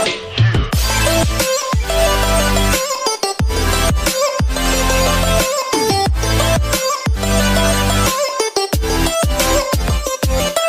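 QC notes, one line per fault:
No faults heard in this clip.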